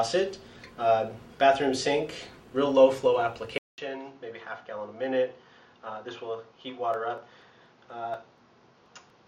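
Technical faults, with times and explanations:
3.58–9.28 s, input switched to a poorer device: After a gap of about 200 ms at 3.58 s, the sound returns duller and boxier, with nothing above 6.9 kHz, a level drop of about 5 dB, and a new noise floor roughly 35 dB below the signal. The likely cause is the system changing its capture source mid-recording to a lower-grade microphone or a headset call profile, whose narrower band, different gain and own self-noise replace the original path.
6.94–9.10 s, periodic USB or driver dropouts: Regular ticks recur every 0.24 s, around ten in all, each where roughly 10 ms of audio is skipped outright rather than filled with silence. The waveform jumps across the missing stretch, and the discontinuity produces a click. The fixed spacing points to a background process stalling the USB bus or audio driver on a timer, so capture misses a short block each cycle.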